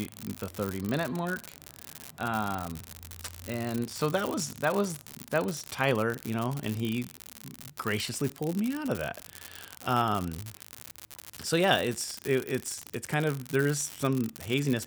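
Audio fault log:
Throughout, unreliable data bit: one marginal bit flips at random, adding identical spikes of about -21 dBFS, a fixed-size crackle that continues through pauses, unlike hiss or clipping distortion.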